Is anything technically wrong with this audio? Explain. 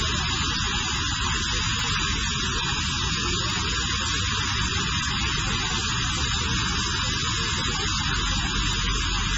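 Yes, there are two problems. Throughout, the sound is dull and watery. This is likely heavy MP3 compression, consistent with a very low bitrate near 16 kbps.

Sharp single clicks occur at 0.96, 1.79, 3.5, 4.48, 5.93, 7.14 and 8.73 seconds. These are likely dropped samples. Under a millisecond goes missing each time, so the waveform jumps.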